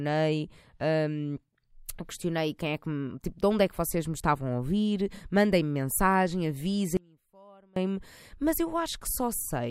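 From 6.97 to 7.76 s the speech abruptly cuts to a faint leak roughly 30 dB down: an audio dropout to a faint residue, likely a signal-path interruption.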